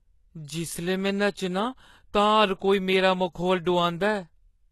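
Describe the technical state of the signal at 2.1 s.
The treble at 2.1 s, as across the whole clip, sounds synthetic, most likely from HE-AAC compression at a very low bitrate, consistent with about 16 kbps. Only the lower spectrum is properly coded; the upper bands are rebuilt by copying lower content upward under a coarse envelope, so sibilants turn gritty and lispy. On a spectrogram, the top shows blocky, repeated texture with misaligned harmonics, and there is nothing above 12.3 kHz.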